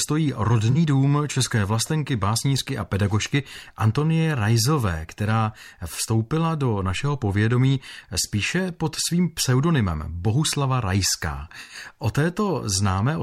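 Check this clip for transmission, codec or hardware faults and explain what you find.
There's one fault type here, AAC frame loss with concealment, hitting the speech three times: 0.71 to 0.77 s, 8.22 to 8.25 s, and 11.61 to 11.75 s. The decoder patches each gap from the last good spectrum, so you get brief smeared, noisy or phasey blurs. The 11.61 s gap is the longest, roughly what four lost frames would produce.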